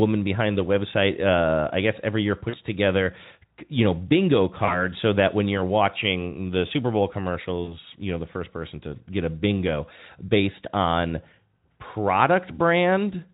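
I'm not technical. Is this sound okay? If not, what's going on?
No, not quite. There are three brief glitches where the line dropped a bit of sound, called VoIP packet loss concealed by the speech codec. The phone software filled each gap by guessing, so you hear a short buzzy, smeared stretch fading out and the voice staying weak or distorted right after. They come at 2.49 to 2.55 s, after "i guess every year"; 4.65 to 4.84 s, after "together you know bingo"; and 7.64 to 7.78 s, after "watching the super bowl".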